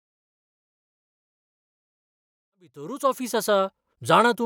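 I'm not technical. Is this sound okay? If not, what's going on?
Yes, nothing wrong here; the level rises gently from around 2.5 s to full at 3.68 s, a normal fade-in of the kind an editor applies.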